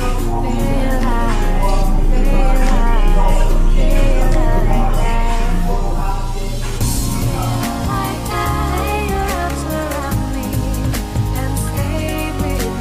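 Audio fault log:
No faults are heard anywhere in the audio. Nothing here calls for an entry in this log.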